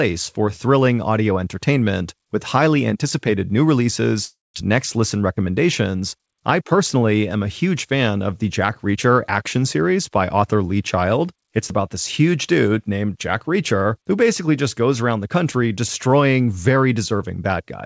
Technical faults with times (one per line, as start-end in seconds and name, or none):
4.25-4.57 long network dropout